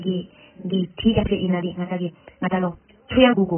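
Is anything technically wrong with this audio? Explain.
Yes, there are two problems. AAC compression affects the whole clip, and a time-stretched section runs from 1.08 s to the end.

AAC compression, throughout: the damage is heavy. This is likely the work of an AAC-LC encoder running at a very low bitrate, around 9 kbps. At that rate it has too few bits for the upper spectrum, so it cuts the top off and coarsely quantises what remains. The result is muffled and smeared speech, with a warbly, fizzy edge on sibilants and held vowels.

Time-stretched section, from 1.08 s to the end: the speech abruptly runs about 1.73 times faster while its pitch stays unchanged. The likely cause is software that squeezed this stretch to fit a shorter length and dropped short slices of audio to keep the pitch. Discarding those fragments makes the delivery rushed.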